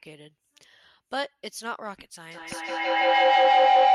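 Speech clip with feedback howl from 2.31 s to the end: a loop between two devices in one room rebuilds itself near 700 Hz, pulsing every 150 ms or so and peaking about 14 dB above the speech.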